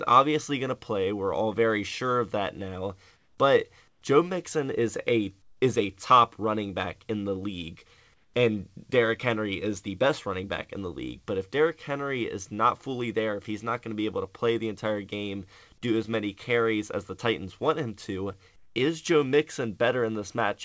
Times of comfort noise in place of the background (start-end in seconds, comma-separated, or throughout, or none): 3.16-3.38, 3.88-4.02, 5.42-5.62, 8.14-8.34, 18.56-18.76